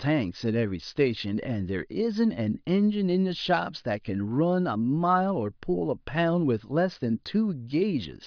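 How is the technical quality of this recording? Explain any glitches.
Nothing stood out on listening; there are no glitches in this recording to explain.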